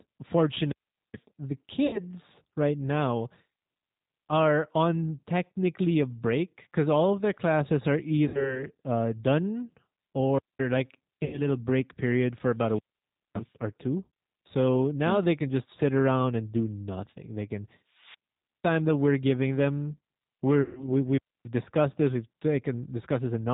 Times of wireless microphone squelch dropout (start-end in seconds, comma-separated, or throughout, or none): 0.58-1.23, 10.30-10.62, 12.54-13.53, 17.88-18.88, 21.12-21.45